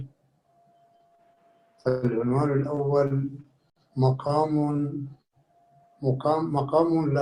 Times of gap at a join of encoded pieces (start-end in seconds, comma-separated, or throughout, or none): none